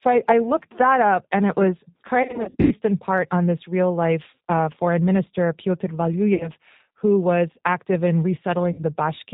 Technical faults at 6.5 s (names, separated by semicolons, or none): G.729 codec; VoIP packet loss concealed by the speech codec